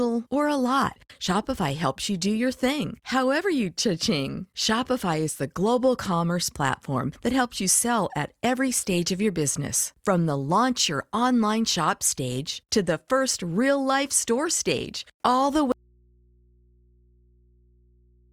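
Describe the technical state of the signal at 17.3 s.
At 17.3 s only mains hum, about 35 dB below the speech, remains: an audio dropout to a faint residue from 15.72 s, after "store stage all the", to the end, likely a lost input with the path left live.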